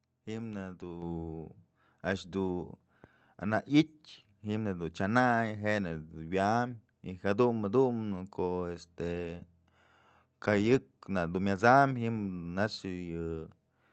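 At 1.02 s the microphone volume is stepped up: the call software judges the input too quiet and raises the device's gain by about 5 dB in a single jump, so the speech and the room background both become suddenly louder together, over a call path whose audio stops near 8 kHz.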